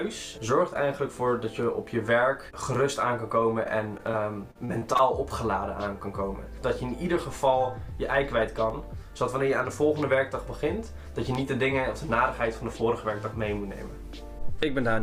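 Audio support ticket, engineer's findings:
Short concealed packet loss, 4.11–4.15 s. Brief smear or wobble where about 20 ms of audio never arrived, which fits one lost 20 ms frame. Decoder's packet loss concealment extended the preceding sound, then crossfaded back. Unlike the later fault, this is a single isolated hole with no recurrence, so it reads as one blip rather than texture.

Repeated packet loss (robotic sound), 4.51–5.01 s. Choppy stretch with five separate gaps, about 140 ms missing in total and the longest 41 ms. Jitter buffer or network path dropping packets repeatedly. Concealment fills each gap before the next arrives, so roughly a quarter of the span is synthesised. Distinct from the single short loss by its recurrence and the sustained robotic character.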